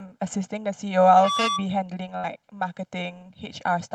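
Throughout the speech, channel delay (comb filtering) gives a hollow, phasey colour: one channel lags the other by roughly a millisecond and a half, and summing to mono carves fixed notches starting around 400 Hz. Unlike a room's reflections, the notches never move or decay.

From 1.04 to 1.66 s a loudspeaker feedback squeal appears. The microphone re-amplifies its own loudspeaker until a single 1.2 kHz tone swells over about a third of a second to roughly 15 dB above the speech. Its steady pitch and self-sustaining growth set it apart from a recorded whistle or tone.

Between 2.17 and 2.26 s a burst of packet loss hits. The receiver stretches the last sound into a fading held buzz or hiss for about 59 ms, then resumes with about 60 ms of speech skipped. That concealed tail distinguishes it from a simple silent dropout.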